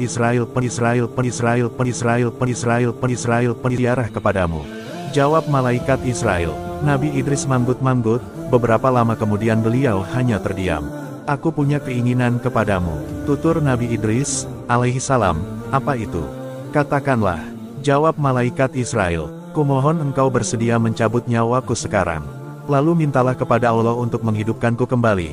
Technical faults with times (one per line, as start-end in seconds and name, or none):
0.00-3.78 broken-record loop